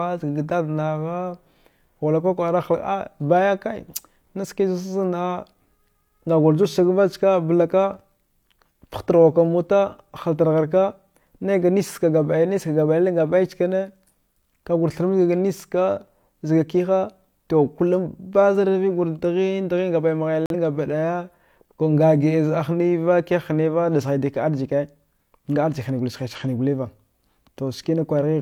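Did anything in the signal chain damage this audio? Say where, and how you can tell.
Yes. Codec stage, corrupt frame muted: sound drops abruptly to silence from 20.46 to 20.55 s, consistent with one rejected frame replaced by silence while timing holds.

Codec stage again, corrupt frame decoded: a short glitch at 26.33 to 26.40 s, peaking around -20 dBFS, where a few damaged frames were decoded with misplaced spectral energy.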